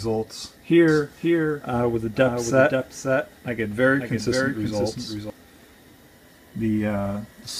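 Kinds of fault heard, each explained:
Doubled audio track: from about 0.88 to 5.3 s a second full-band copy rides about half a second behind, roughly 5 dB quieter, with no decay or room colour, and it cuts in and out abruptly, likely from a slower capture path recording the sound twice.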